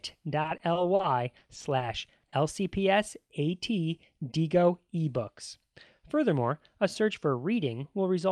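From 0.41 to 1.81 s the speech breaks up with repeated packet loss, giving a robotic sound. Ten separate holes open in that stretch, the longest 40 ms, and about 80 ms of real audio never arrives. Each hole is patched by stretching the sound just before it, so concealment covers 200 ms, around 14% of the span. The result is choppy and buzzy. On a spectrogram the harmonics freeze into flat, repeated bands at each gap. The waveform shows looping, overly regular cycles.

At 2.19 to 2.25 s and again at 2.29 to 2.34 s there is short concealed packet loss. The first hole drops 40 ms, and the second drops 20 ms, patched across 30 ms. The decoder continues the preceding pitch, or shaped noise where the sound was unvoiced, then crossfades back into real audio. Each one is heard as a quick smear or wobble. A spectrogram shows brief, unnaturally smooth harmonic patches, and the waveform shows a short, too-periodic segment.

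Between 4.21 and 5.02 s a jitter buffer speed-up makes the speech run at about 107% of normal pace while the pitch holds steady. The receiver had built up excess delay and trimmed it by cutting out whole pitch periods many times in a row, removing about 70 ms in total. It sounds hurried. On the waveform, syllables look compressed in time with small seams where cycles were dropped. Spectrogram harmonic spacing stays unchanged.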